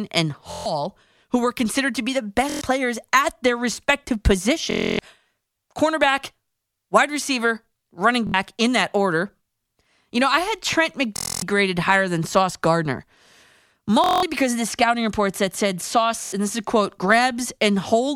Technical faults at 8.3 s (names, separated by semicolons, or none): Bluetooth stutter